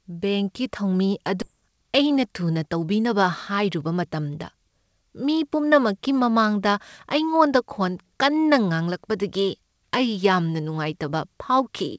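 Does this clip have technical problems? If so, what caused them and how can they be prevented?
Yes. At 1.42 s there is a skip ahead: roughly 0.4 s of speech was dropped and playback jumps forward with no silence, unlike a dropout, which leaves a gap. A steadier network or a jitter buffer that conceals late audio instead of discarding it would prevent this.

From 1.54 to 3.14 s, jitter buffer speed-up plays the speech about 8% fast by cutting short pitch-period pieces, around 150 ms in total. The pitch stays unchanged, unlike a resampling error. Smoothing packet delivery so late packets don't arrive in bursts would avoid the catch-up.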